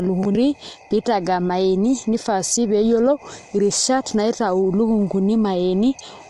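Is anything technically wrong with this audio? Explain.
Yes. Low-delay AAC compression is present throughout the speech. Its likely cause is AAC-ELD at a rate that fits about 32 kbps, whose short frames resolve pitch harmonics poorly. The speech sounds plainly rough and grainy, with noise filling the gaps between harmonics, and nothing above 11.7 kHz.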